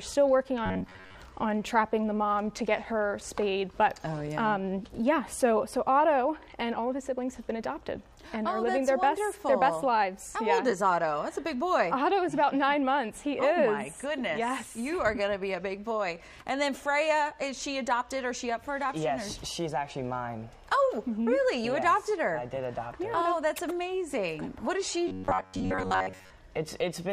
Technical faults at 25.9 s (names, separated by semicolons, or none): robotic sound from repeated short buffers